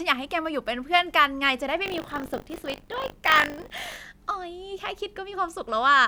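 From 1.84 s to 3.96 s the speech takes on a robotic, rattling buzz at 50 Hz that rides on top of the sound wherever there is signal. This is buffer tearing. The program filling the playback ring buffer and the hardware reading it have slipped into each other, so each period carries a small slice, just under a tenth, of audio from roughly 40 ms earlier, joined with hard edges on both sides. The 50 Hz rate fits a 20 ms buffer period.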